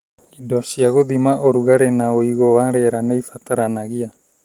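Nothing technically wrong can be heard in this speech recording. It carries Opus voice coding that keeps the full audio band and leaves only a light coded texture, which fits a hybrid-mode stream at around 24 kbps.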